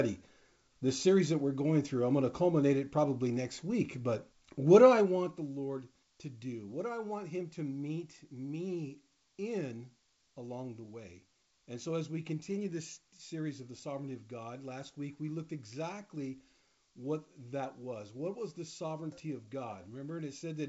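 No faults to report: the level moves smoothly where it changes, and the audio sits within the 8 kHz band the wideband G.722 call path allows.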